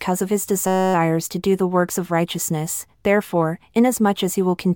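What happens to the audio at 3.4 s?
Nothing goes wrong at 3.4 s; the speech carries on intact through that moment with no dropout, click or distortion.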